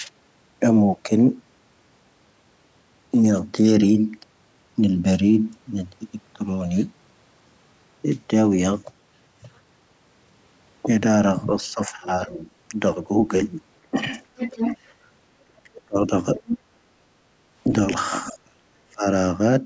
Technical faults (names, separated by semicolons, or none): speech suppressed in double talk; other side's voice leaking through